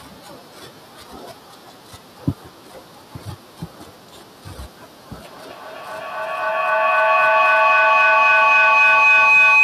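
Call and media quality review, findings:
Feedback howl, 5.25 s to end. Tone near 3 kHz climbs to about 27 dB over speech, repeating roughly every 300 ms. Two same-room devices on the call; loop gain above unity. Unlike echo, repeats grow, never decay.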